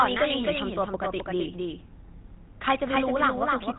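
Speech runs the full clip with a doubled audio track: a second, full-band copy trails the original by about 300 ms, roughly 5 dB quieter, with no decay or room colour. The likely cause is the same signal being captured twice through a slower path. On a waveform, each syllable's envelope reappears as a smaller, identically shaped burst a fixed distance later, and on a spectrogram every pattern is repeated at that offset. The speech also carries plainly audible GSM full-rate codec damage, a buzzy, gravelly roughness from the pulse-train excitation, consistent with 13 kbps GSM. A spectrogram shows a hard ceiling with nothing above 3.9 kHz, plus coarse, smeared harmonic structure below it.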